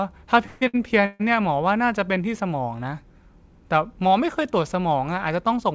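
Speech over a call path bandwidth-limited to 8 kHz, as G.722 at 64 kbps would be, contains two call audio freezes, at 0.46–0.63 s and 1.06–1.22 s. In each, the last sound hangs on as a fading buzz, for about 153 ms and 140 ms respectively, and then resumes where it stopped, likely because packets were delayed and the jitter buffer ran dry. A spectrogram shows smeared horizontal streaks there. A short stall from a late packet at 0.67–0.76 s holds a sound about 64 ms too long, visible on the waveform as a stretched, repetitive segment with a slight dip.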